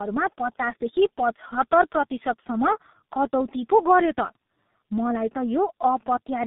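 Throughout, the call passed through two speech codecs in a row, decoded and re-encoded at a network border, which fits an AMR-NB leg feeding a G.723.1 leg at 6.3 kbit/s. This tandem speech coding compounds the losses, leaving speech rough, muffled and warbly, with nothing above 3.8 kHz.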